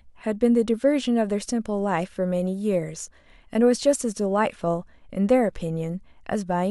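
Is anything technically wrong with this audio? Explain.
No, nothing technically wrong can be heard in this speech recording.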